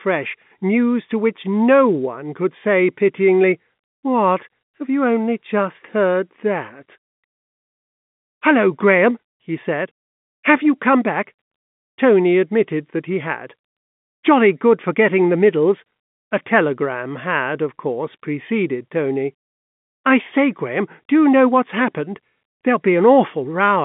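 No technical faults can be heard in this speech, which carries the narrow band of an ordinary G.711 telephone line, roughly 150 Hz to 3.5 kHz with nothing above 3.7 kHz.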